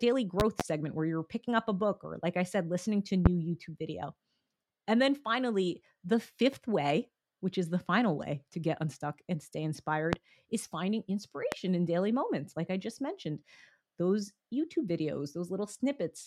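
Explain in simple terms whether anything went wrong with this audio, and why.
Something did go wrong. The speech has loud pops laid on top of it. The first comes as two pops in quick succession between 0.40 and 0.63 seconds. Single pops follow at 3.26 to 3.29, 10.13 to 10.16, and 11.52 to 11.55 seconds. Each is a sharp jolt, far louder than the talking, which carries on underneath. The likely cause is a sudden electrical spike, such as a plug, a switch or static, getting into the signal.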